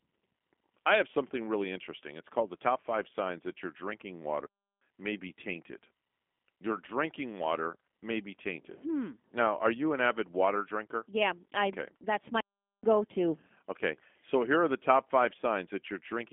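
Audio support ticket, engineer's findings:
G.729 codec damage throughout the speech, plainly audible. Rough, buzzy, slightly synthetic voicing from the filter-plus-pulse rebuild, consistent with an 8 kbit/s G.729A path. Spectrogram: hard ceiling near 3.7 kHz with nothing above, energy confined to the 200 Hz to 3.5 kHz line band, smeared harmonics, blocky frame-rate texture. Waveform looks clean.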